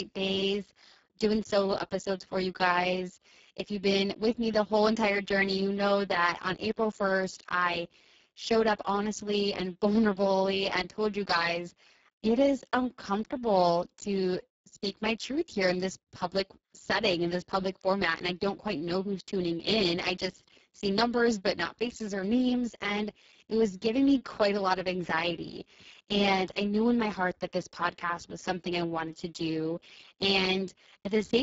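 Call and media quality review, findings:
Speex codec artefacts, whole clip. Speech hoarse, noisy, edging toward robotic; heavy codec damage throughout. Probable component: Speex encoder at a very low quality setting, which fits roughly 6 kbps. CELP excitation starved of bits, so the voicing gets buzzy and rough. Nothing above 7.7 kHz, and the upper band sounds like shaped noise fill rather than real detail. Worth checking the codec config on this leg.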